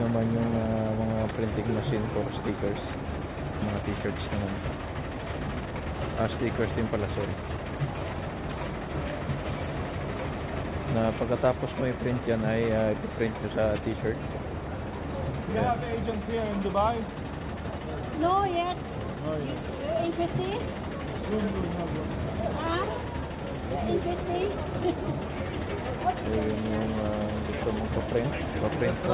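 At 3.62 to 3.64 s the sound lurches forward with no gap or fade: what comes before is butted almost directly against material from further on. This is a skip ahead. About a second and a half of audio never plays, and the playback delay shrinks by the same amount. A stretch was lost in transit or thrown away by an overflowing jitter buffer while later packets were already queued, so the receiver jumped straight to them.

From 5.22 to 8.53 s the audio runs noticeably quick and rushed, about 113% of normal speed, yet its pitch stays where it was. This is a jitter buffer speed-up. The buffer was holding more than its target, so the receiver repeatedly cut out short slices, each one or a few pitch periods long. Together they remove around 0.4 s and pull the delay back down. Throughout, the sound carries the narrow 4 kHz ceiling of the G.711 A-law call path.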